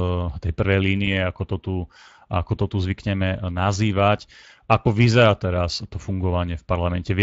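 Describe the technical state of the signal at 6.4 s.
At 6.4 s the speech carries Speex codec damage, which runs through the whole clip rather than being a local event. The CELP coder has too few bits to model the excitation accurately, so the residual it reconstructs is a coarse approximation of the original. That produces a plainly audible noisy, hoarse roughness on the voice. The degree of damage points to a mid-range setting of around 20 kbps.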